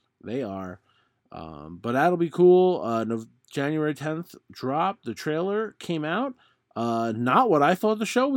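No technical faults can be heard anywhere in the signal, and the speech comes through intact.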